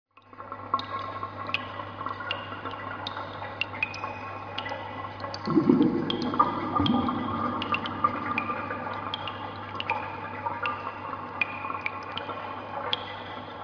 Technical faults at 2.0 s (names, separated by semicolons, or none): none